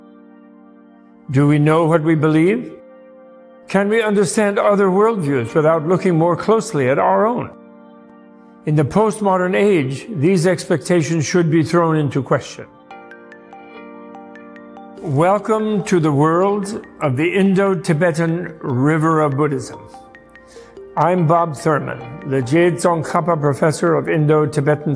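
Nothing in the audio stood out as a technical problem on listening.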